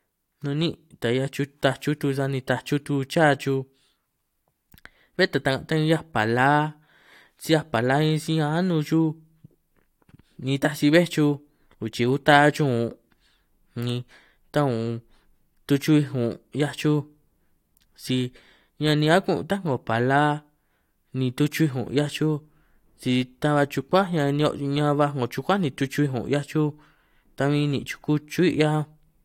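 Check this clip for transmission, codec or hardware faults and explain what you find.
No faults found in it.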